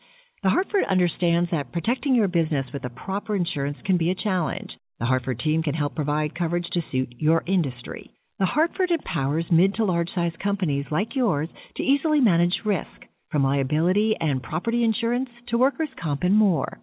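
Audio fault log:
No fault to log in this audio.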